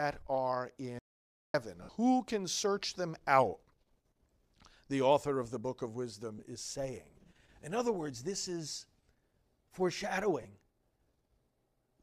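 At 0.99 s the speech cuts off abruptly into an audio dropout to silence lasting about 0.55 s, until 1.54 s. The gap is silent with no room tone underneath, so whatever was being said there is simply gone. The hard edges at both ends point to the input signal being lost while the recorder kept writing blank samples, most likely from a momentary link failure or a brief mute somewhere upstream.

Shortly afterwards, from 1.83 to 1.89 s, comes the first of three lost LE Audio frames events. Its 60 ms span fits six 10 ms LC3 frames going missing. The decoder conceals the hole by replaying the last good spectrum with scrambled phase, so the speech briefly turns into a grainy, hissy smear instead of dropping out. The two later losses are shorter, each about 20 ms and consistent with two frames. One runs from 6.38 to 6.40 s, between "the book of wisdom" and "is saying". The other runs from 10.43 to 10.45 s. 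Both produce the same brief noisy blur over the speech.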